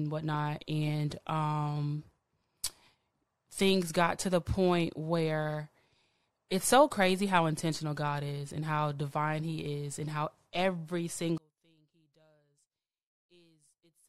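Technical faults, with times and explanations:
11.38 to 14.09 s, one channel inverted: the speech abruptly falls by about 33 dB, leaving a faint trace. The likely cause is reversed polarity on one stereo channel, so the centred voice cancels on summing to mono and only the slight inter-channel difference remains.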